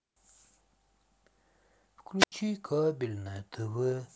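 A wireless microphone squelch dropout occurs from 2.19 to 2.32 s. The analogue FM radio link faded, and the receiver's squelch muted its output. Hiss briefly swells, then an 81 ms hole of near silence cuts into the speech before it returns.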